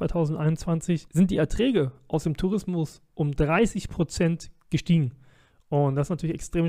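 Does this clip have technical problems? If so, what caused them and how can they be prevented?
No, this clip has no technical problems, so there is nothing to prevent.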